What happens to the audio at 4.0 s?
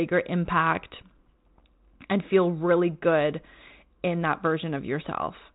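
At 4.0 s the speech carries on intact, with no dropout, click or other fault, only the ordinary narrowband telephone sound of G.726 ADPCM at 32 kbit/s.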